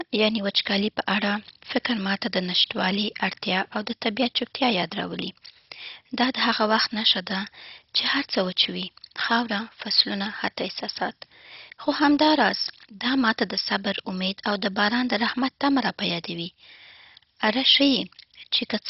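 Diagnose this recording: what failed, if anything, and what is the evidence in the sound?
The speech sounds dull and muffled from start to finish, with nothing above about 5.6 kHz, and a gurgling, granular roughness clings to every syllable. The fault is at the codec stage, most likely MP2 compression at a very low bitrate, with heavy damage that fits something near 32 kbps. Starved of bits, the encoder shuts off its upper sub-bands entirely and quantises the remaining ones coarsely, which leaves this swirling, grainy texture throughout.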